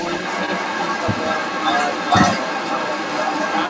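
From 0.00 to 3.70 s, a second voice runs under the speech the whole way through, sitting roughly level with it or a little above. This is the other side's voice leaking through, likely because the far-end audio played from the talker's loudspeaker was only partly removed by the echo canceller. The call path's band limit at 8 kHz, consistent with G.722 at 64 kbps, applies to both voices.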